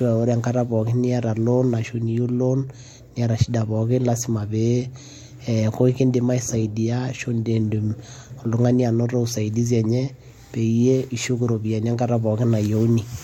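Speech recording; no technical faults heard anywhere in it.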